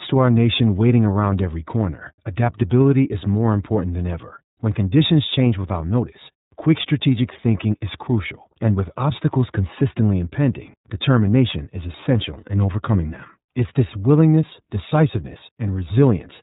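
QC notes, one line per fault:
throughout, iLBC codec: the whole recording has been squeezed through a narrowband VoIP coder, so nothing above 4 kHz survives and the speech sounds boxed-in and dull. Each 30 ms block of excitation is coded on its own, with nothing carried over from the block before, which leaves a plainly audible rough, slightly synthetic grain on the speech. The character fits the 13.33 kbps mode of this codec.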